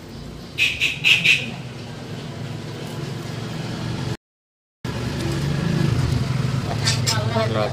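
At 4.15 s the sound stops dead for about 690 ms, until 4.85 s, a playback stall. The likely cause is the player running out of buffered data or its output thread being blocked, so nothing reached the output until it recovered.

From 4.85 s to the end, time-compressed catch-up follows. The player works off its backlog by dropping short segments and cross-fading across the joins, running about 1.15 times faster at unchanged pitch. The result sounds hurried.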